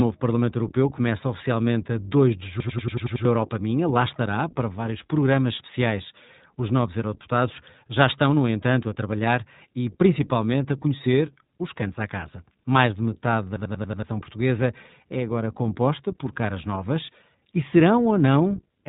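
Throughout, the speech sounds slightly rough and synthetic, with nothing above 3.8 kHz. This is plainly audible iLBC codec damage. The narrowband codec codes each 20 ms frame's excitation on its own, and the sound fits its 15.2 kbps mode.

From 2.60 to 3.25 s, a short fragment stutters like a machine gun at 10.8 Hz, repeating seven times. The same happens from 13.56 to 14.03 s, repeating five times. Each is a system hang loop. The system froze while the sound hardware kept replaying one 93 ms stretch, which fits a 4096-sample buffer. Roughly 0.7 s and 0.5 s of audio are lost.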